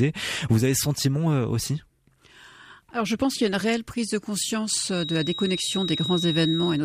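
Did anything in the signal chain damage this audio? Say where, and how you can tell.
Yes. From 4.85 s to the end of the speech, a thin, steady feedback whistle near 3.8 kHz sits behind everything, swelling and fading slowly in level and staying roughly 10 dB below the talker. It never runs away into a howl. The damage is at the acoustic stage between playback and capture. A loudspeaker is likely feeding back into the microphone with loop gain just short of instability, so that one resonant frequency keeps ringing instead of building into a howl.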